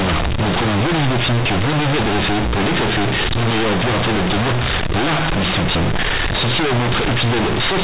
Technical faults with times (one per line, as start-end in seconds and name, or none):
0.00-7.84 companded audio read as linear